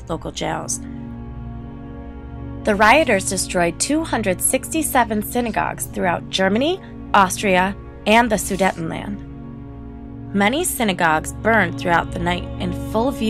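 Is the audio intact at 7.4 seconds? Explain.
No, hard clipping runs from 7.14 to 7.60 s: peaks overdriven by about 4 dB are cut flat, adding high harmonics heard as crackling on loud moments, unlike soft clipping's rounded, duller distortion.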